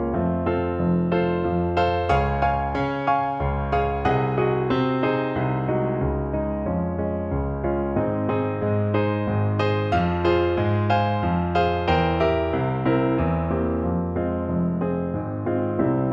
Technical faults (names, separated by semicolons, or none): none